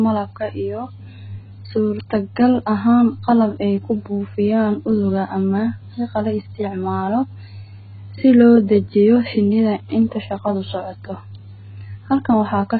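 From start to finish the speech sounds dull, with nothing above 4.5 kHz, and it carries a smeared, warbling texture, likely from AAC compression at a very low bitrate, around 12 kbps. Unlike a simple low-pass filter, the heavy codec damage also leaves the remaining band gappy and unstable.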